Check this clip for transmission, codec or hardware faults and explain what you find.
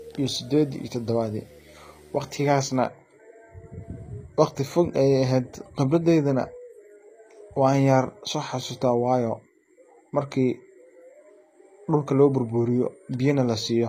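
Two problems stand out: a display buzz at the start and codec damage running the whole way through.

From 0 to 2.78 s there's video or display buzz under the speech. A screen or its video cable is leaking into the audio path, so you get a buzz at the picture's field rate, 75 Hz here, with hash sitting above it. It's around 30 dB below the speech, so it's underneath the voice.

The whole clip also shows plainly audible codec damage, most likely from HE-AAC compression, and the sound fits a low-bitrate HE-AAC v2 stream around 24 kbps. That codec only really encodes the lower spectrum and fakes the treble by copying lower bands upward and shaping them with a rough envelope. The rebuilt top end doesn't line up harmonically with what's below, so the s sounds come out gritty, metallic or lispy.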